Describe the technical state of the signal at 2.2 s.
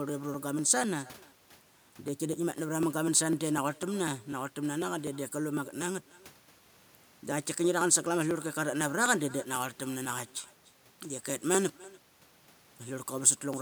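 At 2.2 s the speech carries an echo with no canceller, present for the whole clip. The far end's loudspeaker output reaches its microphone and returns unremoved, so each syllable is trailed roughly 300 ms later by a thin copy sitting about 24 dB below the direct signal.

The same moment falls inside a run of periodic USB or driver dropouts spanning 0.09 to 13.54 s, repeating every 0.249 s. Each time a blocked bus or driver skips roughly a millisecond of audio outright, producing a regular tick that is heard only while speech is present.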